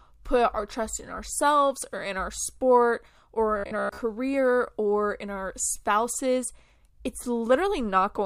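Speech, with one fault. Right after "or in our sport", from 3.58 to 3.98 s, the voice turns into a rigid, metallic buzz. This is robotic sound from repeated short buffers. The buzz sits at 66.7 Hz, which fits a chunk about 15 ms long being played again and again. Most of that stretch is repeats, not fresh audio. The likely cause is audio arriving too seldom, with the player looping its last buffer to fill the gaps.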